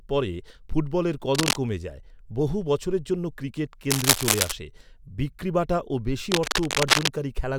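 Cable scratch noise crackles over the speech at 1.32–1.56 s, 3.90–4.52 s (slightly louder than the speech) and 6.32–7.08 s, likely from a worn lead or connector being moved. On a spectrogram these are broadband, irregular smears; the waveform shows jagged, speech-level bursts.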